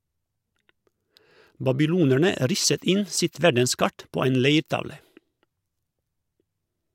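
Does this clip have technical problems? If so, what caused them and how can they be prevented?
No, no technical faults.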